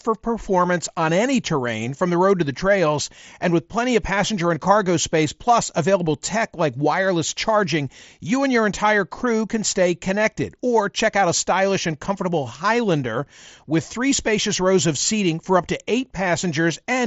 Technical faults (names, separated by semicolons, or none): none